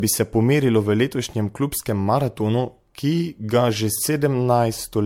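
Across the whole speech recording the sound is swirly, smeared and hollow, with blurred consonant attacks, more degraded than a single lossy pass would leave it. This points to generation loss, likely from repeated MP3 encoding at around 96 kbit/s, perhaps half a dozen or more passes. Each pass requantises on a shifted frame grid, so noise and gaps accumulate. A spectrogram shows nothing above 19.6 kHz, with patchy, flickering holes in the upper bands and smeared onsets.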